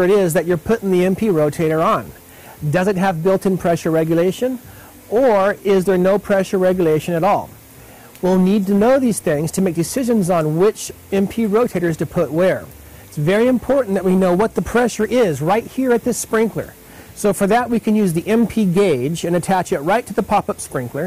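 A harsh, gritty fuzz rides on every loud moment from start to finish, with crackle wherever the level peaks. This is hard clipping: the signal was driven about 7 dB beyond what one stage in the chain could pass, so its peaks were sliced flat. Around one sample in twenty hits that ceiling, and each flattened top adds high harmonics that were never in the original sound, giving the persistent rasp.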